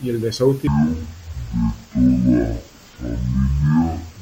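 Stereo read as mono runs from 0.67 s to the end, just after "y el". The speech drops to half speed and a full octave lower, 12 semitones down. That happens because the left and right samples were taken in turn as one channel, so each second of audio is stretched over two.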